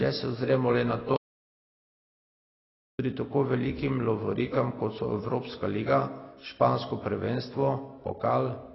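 Throughout the speech, nothing is heard above 5.6 kHz. The sound is dull and smeared, with warbling, fizzy sibilants. Unlike a plain low-pass filter, the band below the cut-off is patchy and unstable, which points to heavy AAC compression, likely AAC-LC at around 16 kbps.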